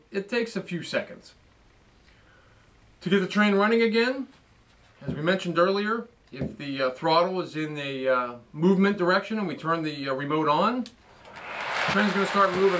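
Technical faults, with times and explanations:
No technical faults can be heard anywhere in the recording.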